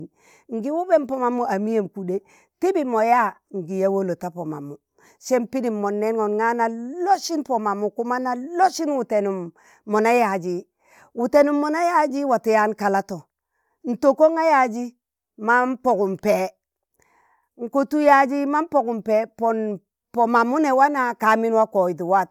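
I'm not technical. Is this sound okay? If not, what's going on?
Yes, no faults to report.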